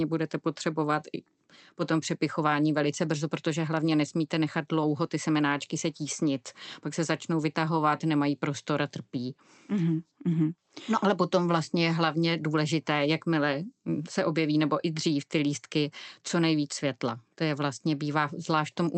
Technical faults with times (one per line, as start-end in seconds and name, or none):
none